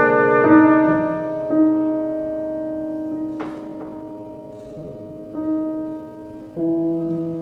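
At 3.63 s the pace suddenly drops and stays slow to the end of the clip. This is a time-stretched section, running at roughly 0.66 times the original speed. The pitch does not fall with it. The sound drags. The likely cause is software lengthening this part to fill a set duration by repeating short slices of the audio.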